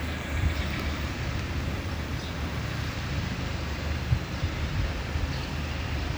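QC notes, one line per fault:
No faults heard in this audio.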